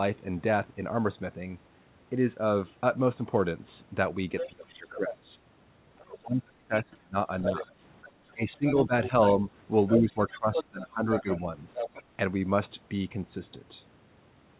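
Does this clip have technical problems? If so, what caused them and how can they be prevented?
Yes. The echo canceller likely failed to remove the far end's loudspeaker signal from the microphone, so the other side's voice leaks through at 4.38–5.16 s, 5.98–6.04 s, 7.42–9.09 s and 9.88–12.03 s. It sits about 10 dB below the speech, faint in the brief second burst, and only about 5 dB under in the last. Giving the canceller a clean reference signal and reducing speaker-to-microphone coupling, for instance with a headset, prevents this.

During double talk the canceller likely could not tell its own talker from the echo and turned both down. Speech is suppressed at 4.47–5.35 s, 6.04–7.8 s, 8.33–9.38 s and 9.99–11.78 s, dipping by roughly 15 to 25 dB. Better double-talk detection, or a headset that removes the echo at its source, prevents this.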